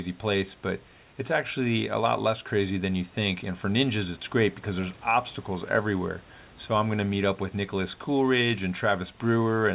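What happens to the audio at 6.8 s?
At 6.8 s the audio is intact, with no dropout, glitch or distortion at that moment.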